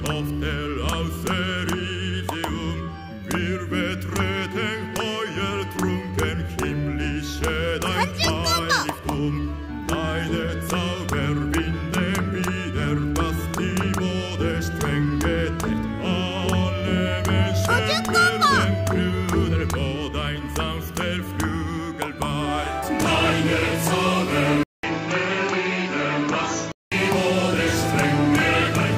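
At 24.63 s the input likely switched to a poorer device. After a 200 ms silence the sound turns duller, with nothing above 7.6 kHz, a few decibels quieter, and carrying a faint new noise floor, until it clears again at 26.92 s.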